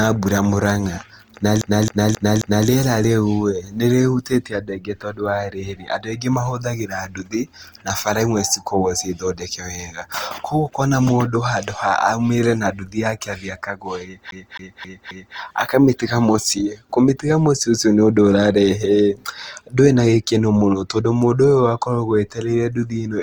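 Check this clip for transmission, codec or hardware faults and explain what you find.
Two kinds of fault are present: coding damage across the whole speech clip, and two bursts of skipping-disc stutter.

Opus compression, throughout: the speech sounds rough and grainy, with a noisy, sandy texture on voiced sounds instead of the watery swirl MP3 produces. The top end is not cut off, and content reaches about 20.1 kHz. The likely cause is Opus in its CELT music mode at a low rate, around 24 kbps. With too few bits, the encoder keeps each band's energy but fills the fine detail with noise or folded copies of lower bands.

CD stuck on one turn, 1.62 to 2.68 s and 14.31 to 15.38 s: each time, a fast, even stutter repeats the same 0.27 s slice four times, with a brief mute at every jump. This is the sound of a scratched disc knocking the laser back one track at the same point on each revolution. 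The player replays that single turn of audio until it manages to move on.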